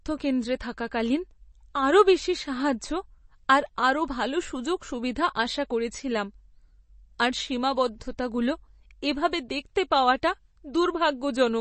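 An MP3 encoder likely starved of bits, fitting roughly 32 kbps, runs throughout, cutting everything above 8.3 kHz and leaving the speech dull, watery and swirly.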